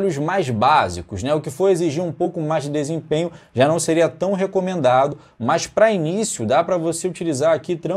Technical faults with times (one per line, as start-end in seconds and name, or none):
2.24 compressed frames skipped
5.12 compressed frames skipped